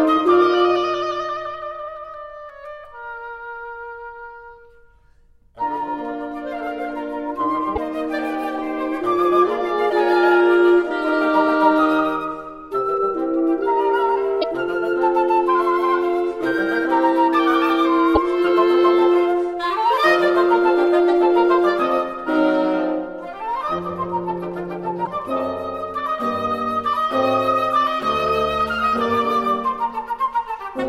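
A broken MP3 bit reservoir is the likely cause of four brief disruptions, at 7.75 to 7.78 s, 14.41 to 14.44 s, 18.14 to 18.17 s and 25.04 to 25.07 s. Each lasts about 30 ms, roughly one frame of 26.1 ms, and the sound skips forward with a short garbled flicker. After a gap in the stream, the next frame reaches back for borrowed data and decodes someone else's bytes instead.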